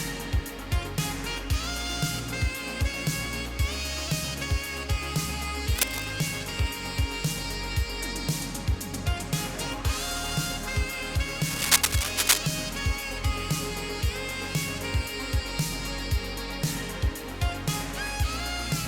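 Cable scratch noise appears from 5.75 to 6.05 s, at about the level of the sound itself, then from 11.44 to 12.38 s, somewhat louder than it. Both are dense, uneven scratching bursts, likely from a worn cable or connector being moved.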